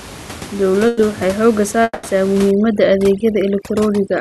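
At 0.87 s the last sound is held and faded for about 100 ms, and the speech picks up at 0.99 s with roughly 100 ms of it gone. This is a burst of packet loss: several packets in a row were lost or arrived too late, so the receiver stretched out the final sound until audio returned.

From 1.83 s to 2.05 s a longer fading fill runs for about 200 ms, drops to about 20 ms of silence, and then the speech resumes with about 200 ms missing. The likely cause is a long network dropout, in which nothing arrived for that stretch and the receiver's fill ran out before audio came back.

From 2.51 s to the end, the room noise, which sits about 17 dB below the speech, drops away and breaks up into twinkling specks. This is overdone noise removal. The suppressor is set so hard that it switches off individual frequency bands close to its noise estimate, and quieter parts of the voice are taken out along with the noise.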